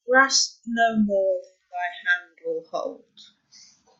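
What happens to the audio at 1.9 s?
Nothing goes wrong at 1.9 s: the speech carries on intact through that moment, with no dropout, click, or other fault.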